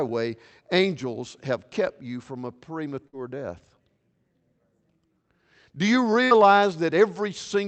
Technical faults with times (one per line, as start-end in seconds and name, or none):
3.07-3.16 burst of packet loss
6.25-6.34 burst of packet loss